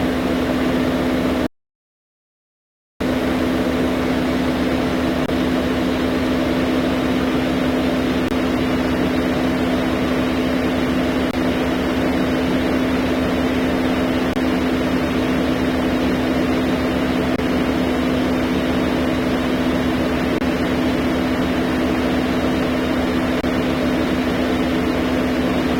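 From start to finish the sound carries a grainy or buzzy distortion, and the quiet stretches are filled with a gritty noise floor rather than true silence. This most likely comes from a stuck bit, one data bit held at a fixed value. Unlike clipping, the damage follows the waveform's bit pattern instead of only the loudest peaks.

At 1.47 s the sound cuts to silence and resumes at 3.01 s exactly where it left off. This is a rebuffering stall, where the player ran dry and waited for more data. It adds about 1.5 s of time and loses nothing, and this single long pause sets it apart from a dropout.

From 5.26 s onward, short holes of 25 ms recur at 5.26, 8.28, 11.31, 14.33, 17.36, 20.38 and 23.41 s. They mark the gaps between chunks, silence inserted at each join of 3-second blocks. Their strict regularity distinguishes them from random packet loss.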